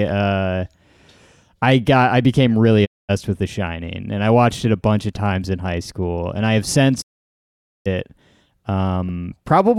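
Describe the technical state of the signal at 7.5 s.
At 7.5 s the signal is in a digital broadcast dropout, 7.00 to 7.88 s: the receiver muted on bad frames, fading out within 20 ms to dead silence, then resuming with that stretch missing rather than delayed.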